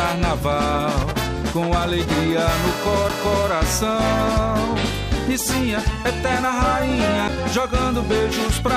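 The audio has two CD skips, at 3.09 s and 7.28 s. Each is a tick with a very brief mute. The sound then resumes from a different point. A knock or disc flaw made the laser jump to another turn of the spiral.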